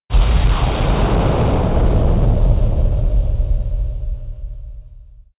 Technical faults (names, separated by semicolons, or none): none